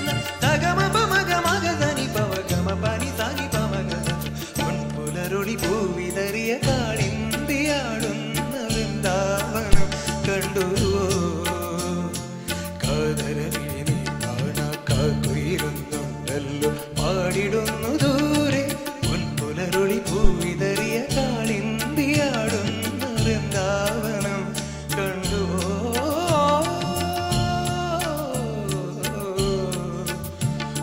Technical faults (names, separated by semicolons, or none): phantom power thump